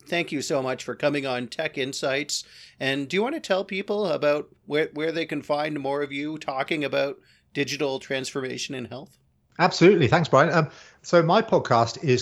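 No technical faults can be heard anywhere in the recording.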